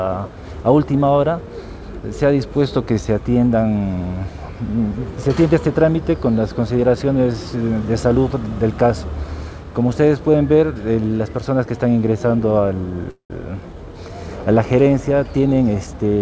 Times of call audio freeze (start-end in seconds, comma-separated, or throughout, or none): 13.10-13.32